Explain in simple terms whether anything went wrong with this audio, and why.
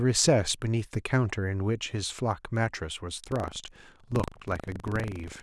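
From 3.2 s to the end, buffer tearing: the software and audio hardware fell out of step, splicing in slivers of older sound, which adds a robotic 25 Hz buzz.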